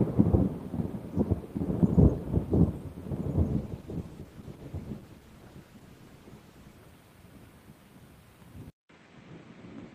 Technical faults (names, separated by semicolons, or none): call bitrate drop; input switched to a poorer device